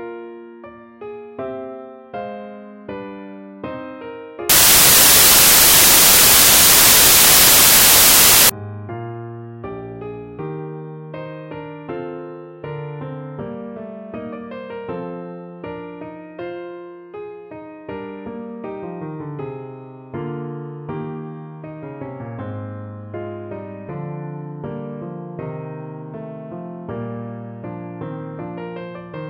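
From 4.49 s to 8.49 s the audio gives way to loud, harsh broadband noise for about four seconds, then returns abruptly. This is samples built from the wrong bytes. Over that stretch the bytes making up each sample were assembled incorrectly, whether shifted by one byte, swapped in order, or read with the wrong alignment. The rapidly fluctuating low-order bits ended up as the most significant part of every value, so the sound turned into broadband hiss.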